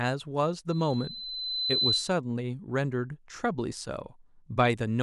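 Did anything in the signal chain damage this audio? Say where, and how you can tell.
Yes, there's loudspeaker feedback squeal in the clip. It comes from the analogue side, where the playback speaker leaks back into the mic. From 0.69 s a steady 4 kHz tone creeps in under the speech, swells over about a second, and sits roughly 5 dB above the talker until it cuts at 2.16 s. The loop gain at 4 kHz went past unity, so that single frequency kept feeding on itself until the loop broke.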